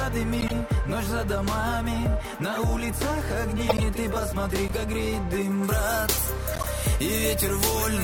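Short chirps and bursts of noise break into the audio at 0.39 to 0.53 s, 2.52 to 2.62 s, 3.65 to 3.83 s and 4.68 to 4.75 s. Each is a corrupt frame decoded: flipped bits in a handful of consecutive compressed frames sent energy to the wrong frequencies, and the decoder played them anyway. The 3.65 s burst is the loudest, and the 2.52 s and 4.68 s events are the quietest.

From 5.63 s to the end, the sound turns thin, bright and hissy. This is pre-emphasis left on. The treble was boosted, about 13 dB more at 10 kHz than at 1 kHz, which fits the FM 75 µs curve, and the matching de-emphasis cut was never applied.

Inside that bright stretch, another corrupt-frame burst of noise lands at 6.53 to 6.68 s.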